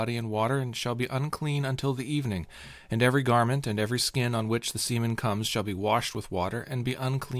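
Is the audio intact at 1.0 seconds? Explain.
Yes, at 1.0 seconds the speech plays through cleanly, with no dropout, click, distortion or other fault to be heard at that point.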